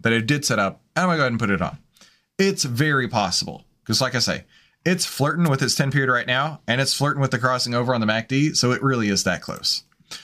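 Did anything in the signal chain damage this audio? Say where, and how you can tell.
Yes. A wireless microphone noise hit occurs in the analogue radio link, 5.44 to 5.49 s. A brief static swish is heard over the speech. The FM signal faded, letting receiver noise through.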